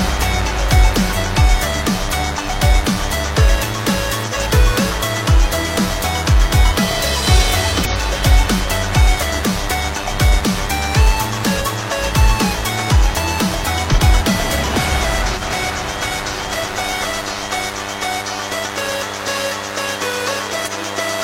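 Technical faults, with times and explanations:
Throughout: DECT cordless phone buzz. A thin, steady buzz at 100 Hz with a dense stack of harmonics sits roughly 10 dB below the sound. A nearby DECT handset or base sends a radio burst every 10 ms, and the audio circuitry rectifies it. Its fixed pitch and sharp, raspy edge set it apart from smoother mains hum.
1.12, 4.18, 7.76, 8.60, 11.57, 13.89 and 20.62 s: compressed frames skipped. Whole frames are never played, so the audio jumps ahead, by about 0.05 to 0.15 s at most points and by about 0.3 s at 7.76 s.
15.34 s: corrupt frame decoded. Around two damaged frames were played anyway, and misread gains and codes put energy at wrong frequencies for about 90 ms. The result is a short burst of misplaced sound peaking at about -15 dBFS. Unlike a skip, nothing is lost from the timeline. Foreign sound is added instead.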